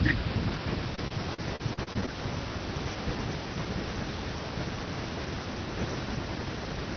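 From 0.95 to 2.09 s there is repeated packet loss with a robotic sound. A rapid run of dropouts, none longer than 38 ms, is each patched by extending the preceding sound. About a fifth of that stretch is concealed, so the speech turns choppy. Across the clip the audio is band-limited to about 6 kHz, which fits a low-bitrate call codec such as Opus.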